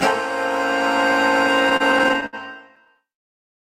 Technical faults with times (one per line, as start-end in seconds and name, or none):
1.69-3.33 repeated stalls (stutter)